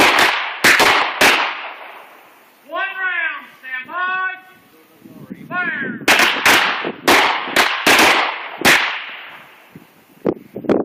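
At 0.83 to 0.87 s there is a brief smear, a short concealed packet loss. About 20 ms of audio arrived too late to decode, and the receiver bridged the gap by extending the preceding sound before blending back.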